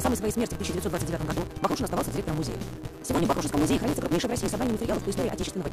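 Block size mismatch (truncated), throughout: each block's tail is discarded, producing a 172 Hz buzz and audio running 1.88 times fast at near-normal pitch, consistent with 256-sample reads.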